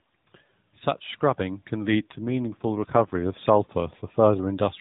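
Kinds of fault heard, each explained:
Automatic gain rising: From 0.6 s to 4.58 s the level climbs by about 6 dB. The gain control has judged the input too quiet and eases its gain upward, so voice and background noise rise together instead of the speech alone. There is no sudden step. On the waveform the envelope widens steadily over those four seconds, and on a spectrogram the whole image brightens gradually, including the noise floor between phrases.
AMR rate drop: Between 1.88 s and 3.33 s the speech turns rougher, buzzier and more synthetic, then recovers. This fits the mobile link pushing the AMR-NB coder down from its 12.2 kbps mode to around 5.9 kbps to spend bits on error protection. There is no gap, and the band stays capped at 4 kHz throughout. In that stretch the spectrogram shows smeared, blockier harmonics and patchier upper detail, while the rate change itself barely alters the waveform envelope.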